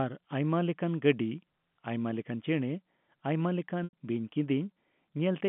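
From 3.84 to 3.93 s the speech briefly holds a buzzy, repeated tone that fades out before the voice returns: packet loss with pitch repetition. About 90 ms went missing, consistent with three lost packets, and the receiver filled the gap by looping the last pitch period over the narrowband G.711 telephone line.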